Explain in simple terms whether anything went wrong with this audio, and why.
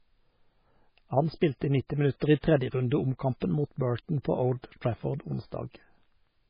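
MP3 compression runs through the whole clip and is the likely reason the speech sounds dull and watery. Squeezed into too few bits, the encoder threw away everything above 5 kHz and dropped quieter detail, which flickers in and out and gives a swirly, metallic edge.

Pre-echo shows up at 2.2 s: a brief hiss of about 17 ms comes just before a sharp onset. The codec spread its noise across a whole chunk of sound, so noise meant for the loud attack leaked into the quiet moment before it.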